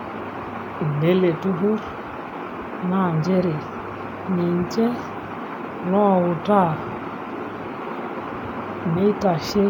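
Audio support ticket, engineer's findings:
No faults found in recording.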